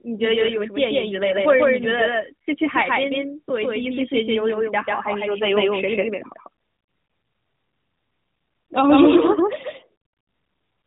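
A second capture path, likely a slower route or an edit holding two copies out of step, mixes the same speech in twice for the whole clip, producing a doubled audio track. The late copy trails by roughly 150 ms at about the same level as the original, so every syllable sounds twice as a dry, flat echo with no decay or room colour. Both copies carry the narrowband mobile sound, with nothing above 3.8 kHz, which fits light AMR-NB coding.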